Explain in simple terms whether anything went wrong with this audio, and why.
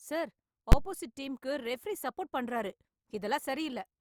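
At 0.72 s, just before "ஆப்போசிட் டீம்க்கு ரெபெரீ சப்போர்ட்", there is one loud bang. That is invalid numbers at full scale. A calculation broke and pushed a block of about 12 ms to maximum level.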